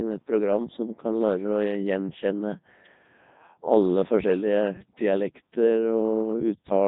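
Speech passed through a Codec 2 vocoder throughout. It sounds robotic and buzzy, rebuilt from synthetic sine tones, which fits the 3.2 kbit/s mode.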